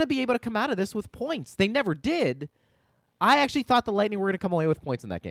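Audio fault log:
No faults: the speech signal shows no audible technical problems anywhere in the recording.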